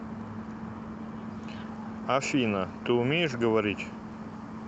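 No technical faults can be heard in this recording.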